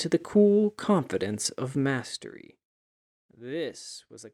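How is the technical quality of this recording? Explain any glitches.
The recording has one glitch, zipper noise. From 1.72 to 2.65 s, a fast ticking rides on the speech as the level falls by around 20 dB. The drop was applied in 1 dB steps with no smoothing, about twenty per second, and each jump leaves a small click.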